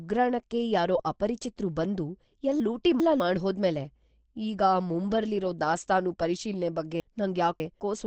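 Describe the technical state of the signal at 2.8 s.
At 2.8 s the speech sounds jumbled. It sits inside a stretch of chunks out of order from 2.6 to 3.2 s: a 200 ms chunk plays two chunks late, after the two that should follow it. Nothing is lost, but the sequence is scrambled by three hard joins.

The same moment is muffled and hoarse, with nothing above 8.6 kHz. That points to Opus compression, likely in its SILK speech mode at a wideband setting. The plainly audible codec damage fits a low rate around 16 kbps.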